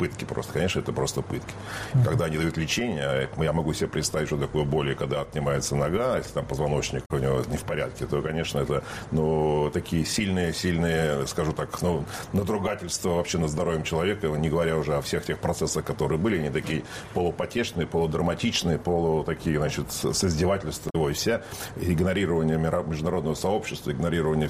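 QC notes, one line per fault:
7.02–7.11 s and 20.86–20.96 s: damaged data in a compressed stream. Each is a short burst of about 0.1 s where corrupted frame bytes are misread by the decoder, which loses sync and hunts for the next valid frame header. The result is a brief chirp or squawk in the audio.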